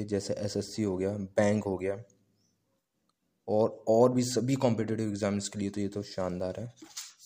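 No technical faults can be heard anywhere in this audio.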